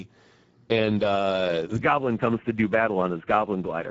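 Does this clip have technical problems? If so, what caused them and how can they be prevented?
Yes. The speech has Speex codec damage throughout, and it is plainly audible. Speex is a CELP codec that rebuilds speech from a filter and an excitation signal. Here few bits go to that excitation, so the speech sounds noisy and hoarse. The damage points to a bitrate near 10 kbps. Nothing is heard above 7.7 kHz. Above 4 kHz there is only a shaped, noise-like fill. To prevent it, use a higher Speex quality setting or a modern codec such as Opus.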